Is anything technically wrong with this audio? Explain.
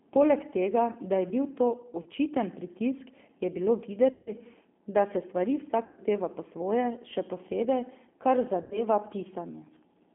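Yes, there are two faults. Throughout, the speech carries G.729 codec damage at 8 kbit/s: confined to roughly 200 Hz to 3.5 kHz, it sounds rough and faintly synthetic because it is rebuilt from a filter, pitch and sparse pulses, unlike a simple band-limit, which would stay smooth.

VoIP packet loss, concealed by the speech codec, hits at 2.03 s (about 30 ms lost), 4.12 s (150 ms), 5.85 s (120 ms) and 8.62 s (90 ms). The decoder stretches its last pitch and filter into a buzzy tone or coloured noise that fades, rather than leaving silence, and the sound stays weak briefly afterwards.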